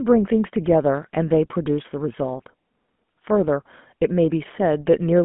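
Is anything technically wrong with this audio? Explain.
Yes. The speech passes through the GSM full-rate codec for the whole clip. The band runs only from about 150 Hz to 3.5 kHz, so the lows and all the air above are gone. The codec models the vocal tract and feeds it a sparse train of pulses, keeping just a fraction of the excitation. That coarse excitation gives the voice a buzzy, gravelly roughness that is plainly audible. This fits the 13 kbps full-rate GSM coder.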